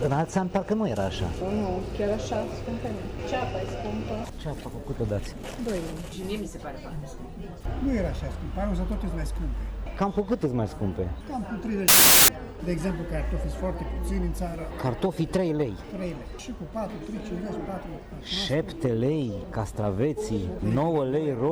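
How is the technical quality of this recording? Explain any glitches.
The recording has one clear glitch, a short burst of corrupted samples. From 11.88 s to 12.28 s, about 0.4 s, the samples are built from the wrong bytes. The reader misassembles each sample, through a byte offset, swapped byte order or wrong alignment, so the rapidly fluctuating low-order bits land in the most significant positions. The result is loud, harsh broadband noise. A spectrogram shows a bright band filling every frequency across that span, and the waveform jumps to large random values.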